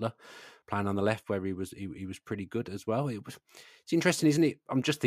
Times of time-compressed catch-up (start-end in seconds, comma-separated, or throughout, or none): none